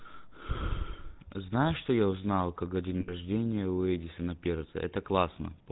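Throughout this speech clip the voice has a buzzy, gravelly roughness and a boxed-in, dull top, with nothing audible above 4 kHz. This is the GSM full-rate codec at work, and the damage is plainly audible. The codec rebuilds the voice from a vocal-tract model driven by a sparse, regularly spaced pulse excitation, and that coarse excitation turns into the grainy buzz heard here. The character fits the 13 kbps full-rate GSM codec. From 3.0 to 3.14 s the sound stops moving and hangs as a rough, metallic ring before normal speech resumes. These are lost GSM frames. The decoder kept replaying the parameters of the last good frame to cover the gap. The length of the held ring suggests about 80 ms of missing audio, which would match four 20 ms frames.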